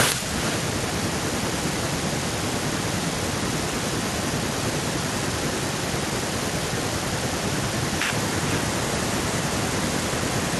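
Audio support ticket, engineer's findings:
Far-end loudspeaker playback re-captured by the far-end mic, no acoustic echo canceller in the path. Echo with no canceller, present throughout the speech. Talker's own speech returns roughly half a second later, about 12 dB down, thinner, shadowing every phrase. Probable component: far-end endpoint AEC disabled or missing. Delay reflects full network round trip plus far-end playback and capture buffering.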